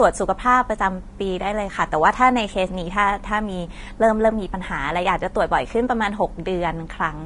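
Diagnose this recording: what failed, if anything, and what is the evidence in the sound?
The codec stage likely failed: throughout the speech, everything above 10.6 kHz is gone and the remaining treble sounds hissy and grainy, which points to Vorbis compression at a low bitrate near 34 kbps. Coarse quantisation turns fine detail into noise. A spectrogram shows a hard ceiling at 10.6 kHz and speckled upper bands.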